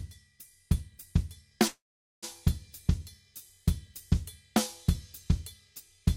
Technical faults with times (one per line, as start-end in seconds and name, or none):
1.67-2.24 call audio freeze